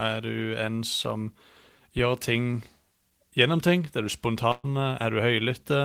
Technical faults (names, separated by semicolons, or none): burst of packet loss